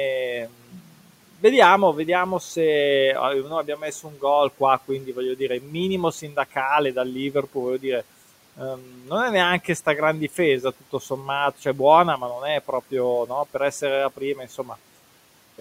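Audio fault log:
0.48–1.43, 3.64–4.22, 4.58–5.73, 6.22–6.55, 7.32–7.84, 8.57–9.11 and 14.17–14.71 s, speech cut by the noise suppressor: soft speech fragments are taken for noise and pushed down by about 8 to 13 dB. They sound swallowed and faint rather than silent, unlike a dropout.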